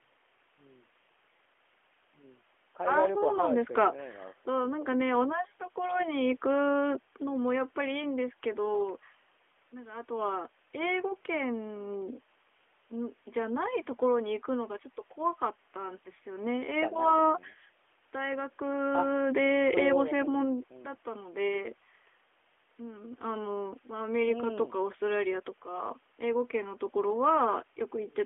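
No technical faults can be heard anywhere in the speech.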